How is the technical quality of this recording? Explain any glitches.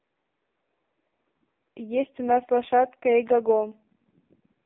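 Poor: the speech is coded by an AMR narrowband mobile codec for the whole clip. It sounds thin, buzzy and synthetic, with no content above 3.8 kHz and weak lows under about 250 Hz. The codec rebuilds each 20 ms frame from a vocal-tract model driven by a few pulses, and damage this heavy fits a low bitrate of around 5 kbps.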